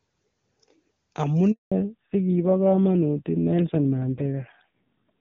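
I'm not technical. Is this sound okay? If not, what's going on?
No. At about 1.52 s a handover gap occurs: the call switches networks and nothing gets through, so the sound drops out for 0.2 s. From 1.72 s, a fallback to narrowband follows: the call leaves HD Voice for an older, lower-quality system, removing everything above 4 kHz and leaving speech duller and rougher until the end. Before the switch, the HD Voice codec sounds clear.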